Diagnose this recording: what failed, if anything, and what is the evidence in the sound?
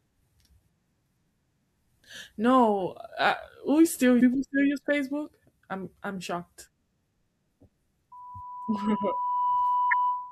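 At the codec stage, there's damaged data in the compressed stream: a brief glitch from 4.17 to 4.21 s, just before "still use", and another from 9.91 to 9.93 s. The decoder hit corrupted frames, lost sync and jumped ahead to the next header.

Further back, at the mic, there's a loudspeaker feedback squeal from 8.12 s to the end. A 991 Hz tone swells over about a second and a half until it's roughly as loud as the speech. Mic and speaker formed a loop with gain above one there.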